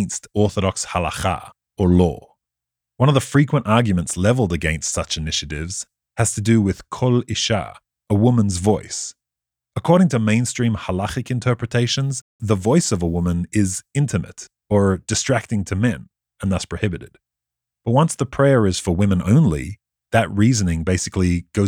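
From 11.83 to 13.33 s the speech turns grainy, with a gritty distortion that rides on the sound itself, sitting around 45 dB below the signal. This is likely low bit depth without dither: samples rounded to a coarse grid, consistent with roughly 10 bits, so the error tracks the signal instead of forming an independent noise floor. On a waveform, quiet stretches look stepped; a spectrogram shows a raised, signal-following noise band across that span.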